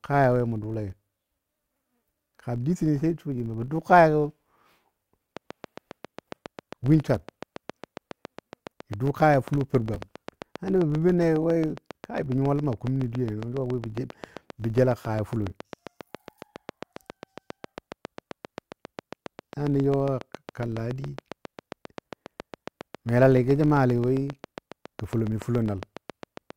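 From the start and throughout, a filter restarted on every block: the processing drops its memory at each block boundary and begins again from silence, so every block opens with a small transient. The blocks repeat 50 times a second, which points to blocks about 20 ms long. The result is a steady 50 Hz buzz laid over the speech, rising and falling with the level of the talker rather than sitting at a fixed volume.

From 5.37 s to 26.51 s, a train of clicks runs over the audio. Something, likely interference from nearby equipment or a faulty connection, injects a short pulse at a regular 7.33 per second, some 150 in all. Each click has much the same shape and peaks around 10 dB above the speech. The result is an even, prominent ticking that carries on through the pauses as well as under the talking.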